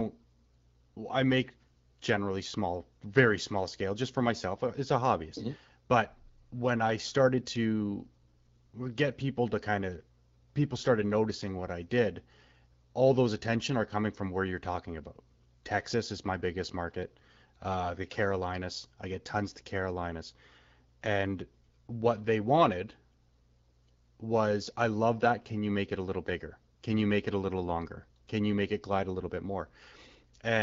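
Listening through the speech, nothing stood out as a technical fault at any point.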